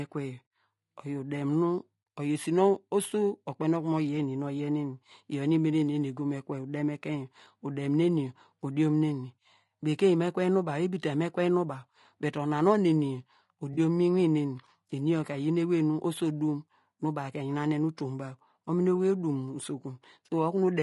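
Throughout the speech, the sound is rough and grainy. Noise fills the gaps between harmonics, and the top band sounds thin and synthetic. The damage is plainly audible. The likely cause is low-delay AAC compression, AAC-ELD, at a rate that fits about 32 kbps.

At 13.73 to 13.78 s there is AAC frame loss with concealment. About 40 ms of audio went missing, which fits two lost frames. The decoder patched the gap from the preceding spectrum. It sounds like a brief smeared, noisy blur.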